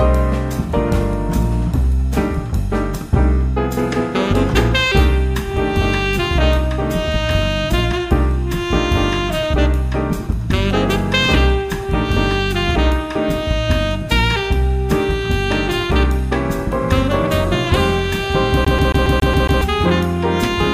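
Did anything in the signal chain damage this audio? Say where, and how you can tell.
Yes, at playback: from 18.65 to 19.61 s the disc gets stuck on one turn. A scratch keeps kicking the laser back a track, so the same 138 ms slice repeats seven times, each restart marked by a tiny mute. That even, rapid stutter is a skipping CD.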